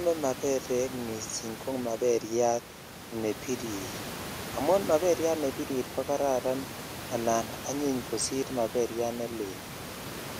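Nothing stood out on listening to the speech, with only the room's own background noise audible at about 14 dB below the voice.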